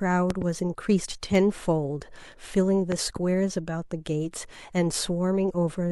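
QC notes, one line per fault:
0.30–0.44 s: loud pop, a double pop standing roughly 15 dB above the speech; likely a voltage step from a plug or switch, seen as two sharp waveform spikes.
1.32 s: corrupt frame decoded, a brief glitch as one damaged compressed frame put energy at wrong frequencies; a narrow vertical smear on the spectrogram.
2.92–3.19 s: loud pop, another pair of sharp thumps about 15 dB over the speech, again likely a voltage step; two tall transient spikes in the waveform.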